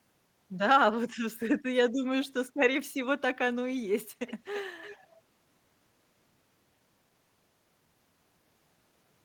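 Echo leak appears three times: 4.27 to 4.33 s, 4.53 to 4.63 s, and 4.81 to 5.16 s. A faint copy of the speech returns about 334 ms late, well below the main level. A loudspeaker echo canceller likely let some far-end sound through.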